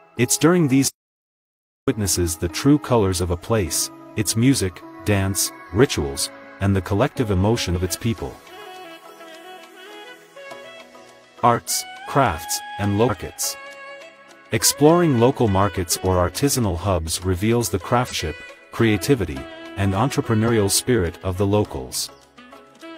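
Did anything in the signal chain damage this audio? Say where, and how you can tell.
Yes. From 0.88 to 1.88 s the sound stops dead for about one second. The gap is silent, with no room tone, and the sound resumes abruptly. This audio dropout to silence likely came from the input link or converter losing signal.

Compressed frames were skipped in two places, at 13.05 to 13.11 s and 18.07 to 18.13 s. Each time the audio jumps ahead, about 300 ms and 200 ms respectively. That fits whole 46.4 ms codec frames dropped in decoding or storage.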